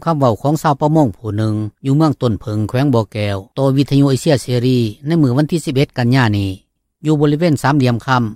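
Nothing in the audio stood out as a technical fault on listening.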